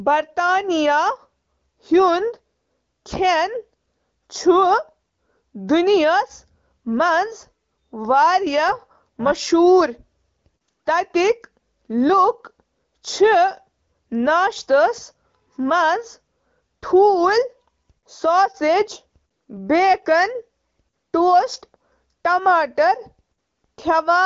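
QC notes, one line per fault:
8.68–9.49 s, overlap-add ripple: a metallic buzz with extra tones around each note lasting about 0.8 s. The level dips and swells by about 6 dB some four hundred times a second. The cause is windowed frames rejoined with an overlap that fails to sum to constant gain, so loudness pulses once per frame.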